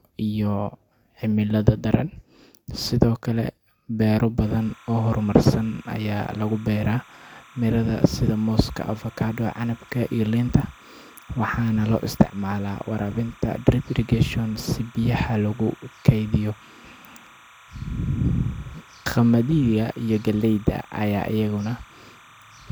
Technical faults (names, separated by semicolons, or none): timecode bleed